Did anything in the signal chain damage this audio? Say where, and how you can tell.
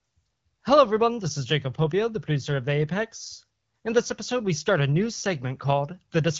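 No, nothing in the chain damaged this speech: it has passed through an AMR wideband (HD Voice) link whose clarity fits the 12.65 kbit/s mode, with the top band ending near 7 kHz as that codec's design sets it.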